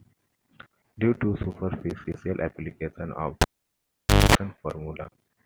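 Right after "to superficial application of", at 3.41 s, a cable pulled and plugged in: a pop, about 0.89 s unplugged, mostly near silence but including a 0.23 s burst of 50 Hz mains buzz as only the tip connects. A second pop at 4.35 s marks reconnection. That hum-then-pop sequence distinguishes it from a plain dropout.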